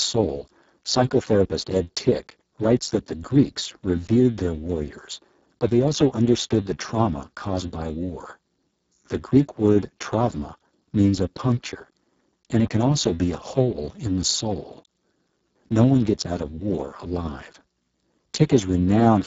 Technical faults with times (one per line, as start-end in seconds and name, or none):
0.00-19.26 Speex codec